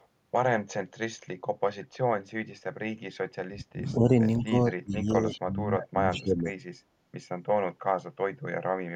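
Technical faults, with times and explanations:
0.00–0.06 s and 5.31–5.41 s, echo leak: a delayed copy of the speech trails the original by 166 ms, very faint in the first instance and much stronger in the second, only around 20 dB below the speech. The likely cause is a far end on loudspeaker whose echo canceller let part of its microphone pickup return. On a spectrogram it appears as a fainter duplicate of the speech's harmonic pattern shifted 166 ms to the right.
3.35–4.11 s, 4.42–4.54 s and 4.72–6.46 s, speech suppressed in double talk: the speech is pulled down in chunks, by roughly 30 dB in the first and third spans (about 0.7 s and 1.5 s affected) and a shallower 15 dB or so in the brief middle one. The likely cause is an echo canceller that could not separate this talker from overlapping far-end audio and attenuated both. The waveform shows sudden hollows in the envelope, and the spectrogram shows energy fading out in blocks.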